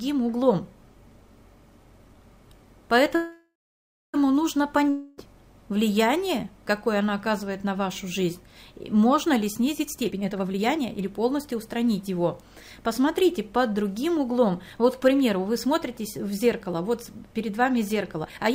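At 3.15 s the audio stalls for about one second, to 4.16 s. This is a call audio freeze: the last sound is stretched into a fading buzz that runs out into about 0.61 s of silence. When playback resumes it picks up exactly where it stopped, with nothing skipped. The likely cause is late packets draining the jitter buffer. Unlike a dropout, the stall inserts a gap without losing any audio, and everything after it now plays about a second later.

At 4.90 s a second break lasts 0.28 s, to 5.20 s. This is a long network dropout. It again begins with a decaying buzz from the last sound, which fills the whole break with no stretch of pure silence. The difference is on resumption: the audio continues from further on, and those 0.28 s are gone, probably because the packets carrying them never arrived. That skip, rather than a pause that keeps everything, is what separates it from the freeze.

From 9.87 to 11.04 s the audio runs at about 134% speed, and from 18.26 s to the very end at about 136%. 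These are jitter buffer speed-ups. The receiver repeatedly cut out tiny pitch-period slices to shrink a swollen buffer, roughly four tenths of a second in the first stretch and about a tenth in the second. The audio sounds hurried but keeps its pitch, which distinguishes it from a simple playback-rate error.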